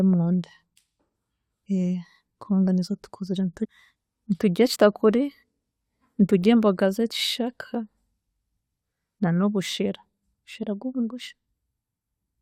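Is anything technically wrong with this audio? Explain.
Yes. Compressed frames are skipped twice in this speech. At 3.64 to 3.66 s, right after "kubanga nizo tukuzire", about 400 ms of audio vanishes, roughly twenty 21.3 ms frames. At 4.74 to 4.76 s, about 100 ms, around four frames, is lost. The decoder never plays those frames, so the speech jumps forward. Unlike a dropout, no silence is left.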